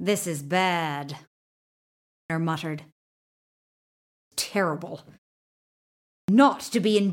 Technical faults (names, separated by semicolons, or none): clipped start after a pause